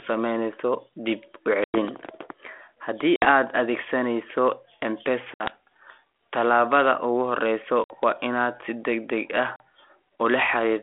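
Speech over a G.726 ADPCM line at 32 kbit/s shows packet loss on an ADPCM call: hard silent gaps of 40 to 100 ms at 1.64, 3.16, 5.34, 7.84 and 9.56 s, each followed by briefly distorted speech as the decoder resynchronises. That aftermath sets it apart from a clean dropout.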